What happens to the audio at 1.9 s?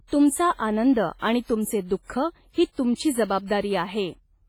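At 1.9 s you're hearing the same damage that runs through the whole speech clip, likely WMA compression. The transform codec's long blocks smear quantisation noise over tens of milliseconds, so the speech rings and goes washy, with a hiss that swells and fades with the signal. Quiet spectral detail gets zeroed out, and the heavy damage fits a low bitrate of around 24 kbps from an older WMA encoder.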